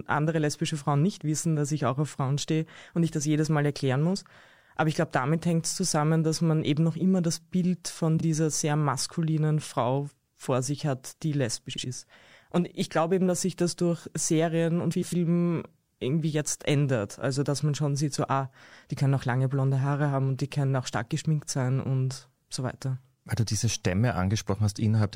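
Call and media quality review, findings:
Frames out of order in speech at 8.17–8.23 s, 11.73–11.84 s and 14.91–15.13 s: brief garbled flutter. Adjacent blocks of 26.1, 52.2 and 104.5 ms arrived swapped and were decoded in that order, fitting one, two and four codec frames. Spectrogram: formant tracks jumping back. No duration lost.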